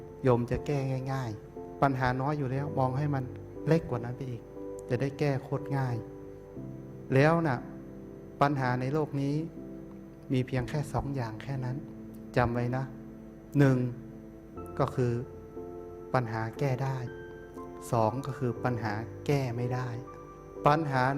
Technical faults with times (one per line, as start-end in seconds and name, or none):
none